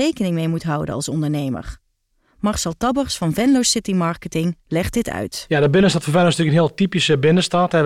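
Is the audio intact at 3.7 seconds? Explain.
Yes, at 3.7 seconds the speech plays through intact, with no audible fault at that moment.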